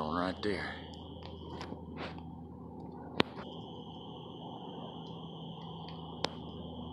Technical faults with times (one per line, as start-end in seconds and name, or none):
3.42 damaged data in a compressed stream